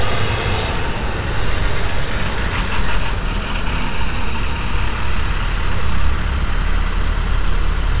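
A recording of sounds that came over a WebRTC call path, with nothing above 4 kHz, as fits a G.711 mu-law link, and nothing technically wrong with it.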